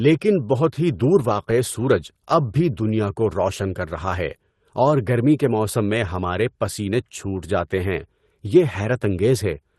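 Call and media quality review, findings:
No faults found in the speech; the WebRTC call path shows only its ordinary coding character, with the top end rolling off near 12 kHz, which fits Opus at a modest call bitrate.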